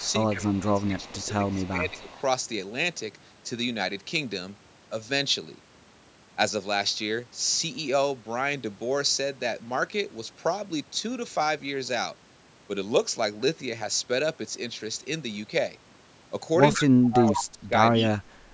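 In this speech clip, the talker's voice dips and breaks up from 0.0 to 2.08 s by about 15 dB, and again from 16.86 to 17.73 s and 18.07 to 18.29 s by about 30 dB. That is likely speech suppressed in double talk, as the echo canceller ducked its own talker along with the loudspeaker echo. A faint delayed copy of the voice trails by 156 ms from 0.0 to 2.17 s, rising to nearly speech level from 16.73 to 17.44 s and returning briefly at 17.94 s. That points to echo leak, likely from a loudspeaker's echo canceller missing part of its own pickup, all heard through call-band audio that stops at 8 kHz.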